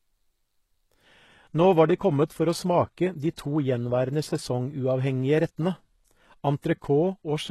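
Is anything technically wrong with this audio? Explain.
Yes. From 1.04 s to the end at 7.51 s, the speech suddenly dulls, with nothing above 12.3 kHz and a thin, synthetic top, but no gap. This is an adaptive stream at a lower bitrate: a slowed connection forced a leaner encoding, which fits a drop from 96 kbit/s AAC to 16 kbit/s HE-AAC.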